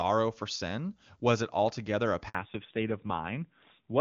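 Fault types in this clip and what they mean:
Handover gap at 2.29 s: just after "it altogether a", the sound cuts out for 60 ms, until 2.35 s. The call was switching networks and no speech frames arrived during the move, so whatever was said in that stretch is lost.
Fallback to narrowband from 2.35 s to the end: the call drops from HD Voice, clean wideband AMR-WB before this point, to an older narrowband codec, fitting AMR-NB at 7.4 kbit/s. Nothing above 4 kHz passes, so the voice turns duller and rougher.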